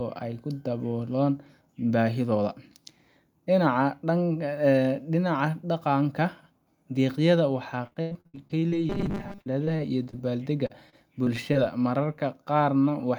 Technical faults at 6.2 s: none

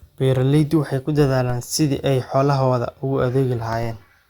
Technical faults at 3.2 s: DC step

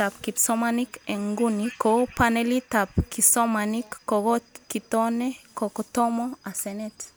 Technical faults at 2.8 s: none

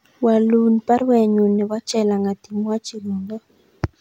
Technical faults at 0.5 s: none

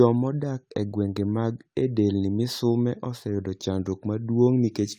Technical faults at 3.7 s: none

